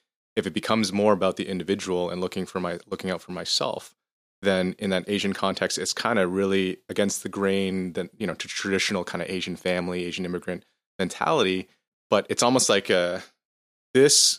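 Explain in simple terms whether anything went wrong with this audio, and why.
Something did go wrong. The speech has four small skips, at 7.27, 8.33, 11.44 and 12.94 seconds. Each sounds like a tiny jump forward. The first comes right after "of really against the", the second after "grain that you know", and the last after "it's almost like a". The likely cause is a dropped buffer (overrun). The recording software fell behind, so a sliver of about a hundredth of a second was lost. The two sides were then joined with no gap.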